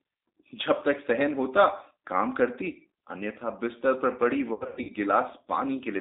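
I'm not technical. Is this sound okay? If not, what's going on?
No. The whole clip has passed through the G.729 codec, a compact phone-call voice format. The voice sounds thin and slightly rough and robotic, like an internet phone line, rather than muffled or hissy. Nothing above about 3.7 kHz survives.

From 4.53 to 4.92 s there is VoIP packet loss concealed by the speech codec. Bits of the call went missing, with gaps up to 0.1 s, and the phone filled them with a buzzy or noisy, fading guess instead of silence or clicks, so the voice stays weak or distorted for a moment afterwards.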